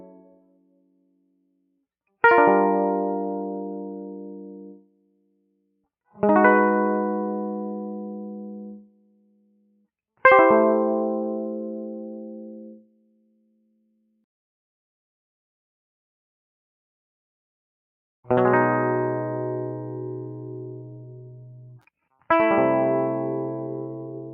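Across the whole music clip, a noise suppressor built for speech is acting on the music, with gain swinging by something like 20 dB. It treats sustained tones and ambience as noise, so attacks pass while held material and decays are pulled down. The result is audible pumping and a thinned, fluttering texture, with reverb tails clipped short instead of fading naturally.

Instances of sound cut by the noise suppressor fall at 0.0 to 1.84 s, 4.75 to 5.86 s, 8.78 to 9.87 s and 12.75 to 14.25 s, each lasting roughly one to two seconds. In these stretches the suppressor clamps down hard, reaching about 22 dB of attenuation. Sustained content sinks well below the surrounding level and its tail is cut off.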